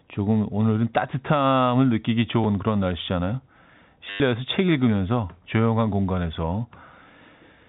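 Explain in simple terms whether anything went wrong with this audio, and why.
The speech has packet loss with the last packet repeated. A small blip comes at 2.44 s. From 4.1 to 4.2 s, a short robotic buzz stutters. Missing audio was filled by replaying the previous chunk, whose repeats fit 10 ms packets, so it buzzes at 100 Hz. The telephone-style G.711 sound is expected.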